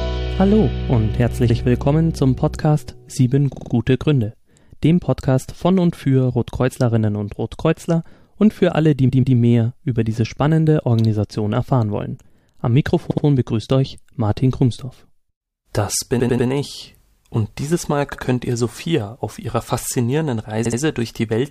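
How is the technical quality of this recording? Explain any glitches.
The recording has a recurring stutter from repeated frames at 1.49, 3.53, 9.08, 13.10, 16.19, 18.14 and 20.64 s. Short compressed blocks of 46 to 139 ms get played again, one to four extra times, so the same snippet loops.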